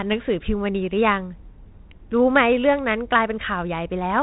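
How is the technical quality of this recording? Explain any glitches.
No glitches or faults present.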